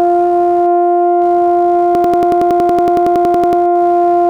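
Computer activity noise runs through the whole music clip: a buzzing, scratchy layer pulsing at around 70 per second, sitting roughly 30 dB below the music. It rises and falls with the computer's workload rather than with the music. Processor, graphics or mouse activity draws changing current, and that disturbs the ground the audio circuit shares, so the load fluctuations leak into the signal as this intermittent chatter.

A system hang loop occurs from 1.95 to 3.62 s. The computer or its driver stalled while the sound hardware kept replaying the same stretch of its ring buffer. A 92.9 ms slice of music repeats 18 times at about 10.8 Hz, which fits a 4096-sample buffer, and it sounds like a hard machine-gun stutter. When playback resumes, practically nothing of the music seems to have been skipped.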